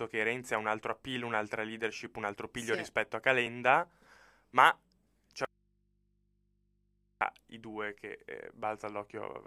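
At 3.47 s, just after "piglio sì rispetto a", compressed frames are skipped: about two frames, a few milliseconds of audio, never reach the output, and the audio jumps ahead by that much.

From 5.45 s to 7.21 s, after "ma c'è" and before "i due che", the speech cuts abruptly to a faint residue of mains hum, roughly 40 dB down, for about 1.76 s. The likely cause is a lost input with a still-live downstream path. The waveform shows a near-flat band, and the spectrogram shows only low hum lines.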